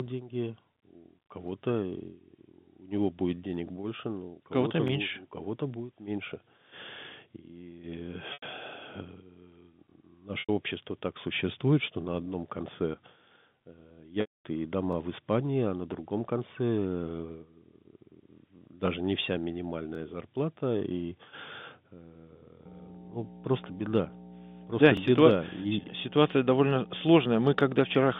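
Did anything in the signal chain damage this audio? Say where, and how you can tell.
Yes. Overlapping chunks, buffer stage: brief stutters at 4.88, 14.93, 19.95 (between "даже не вся" and "зарплата и") and 24.97 s, every 5 s. Each chunk starts about 23 ms early, so that sliver plays twice.

Packet loss with pitch repetition, network: dropouts at 8.33 s and 10.40 s (just before "общество так существует что") last 90 ms and sound like a held, buzzy syllable. At 14.21 s, 240 ms is lost, so the repeated pitch period fades to silence before the speech cross-fades back.

Mains hum from the analogue wiring comes in at 22.65 s and runs to the end. It's a steady 60 Hz tone, loud at roughly 10 dB under the speech. That points to a ground loop or a nearby transformer leaking the power line into the signal.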